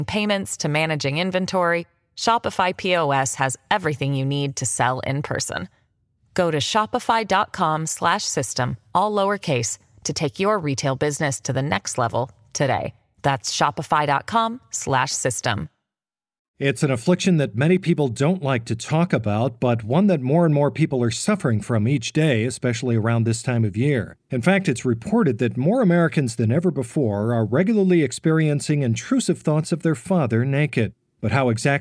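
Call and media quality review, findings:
No faults found in this speech recording. Nothing to escalate; ticket can be closed.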